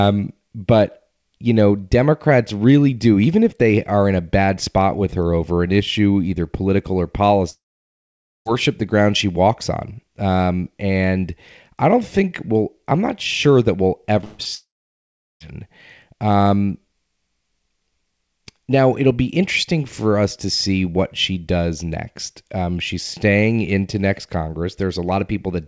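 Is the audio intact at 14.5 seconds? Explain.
No. Just after "not sure that we'll", a burst of packet loss runs from 14.24 to 14.41 s. About 140 ms of audio never arrived, and the receiver stretched the last sound across the hole, fading it as it went. The result is a held, dimming buzz or a fading hiss rather than silence, and the speech picks up later with that stretch gone. It is longer than the brief smear of a single short loss.

Right after it, from 14.43 to 14.47 s, comes a short concealed packet loss. Only about 20 ms is missing. The decoder patched it by extending the preceding sound and blending back into real audio, so it registers as a quick wobble or smear rather than a held tone. It is too brief to fade out the way the burst before it does.

From 14.55 to 15.42 s the audio drops out almost entirely. A short fading tail gives way to about 750 ms of silence, and speech resumes with roughly 860 ms missing. 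This is likely a long network dropout. What separates it from the burst is the dead-quiet stretch after the concealment gives up. All of this passes through a G.722 call path, which carries nothing above 8 kHz.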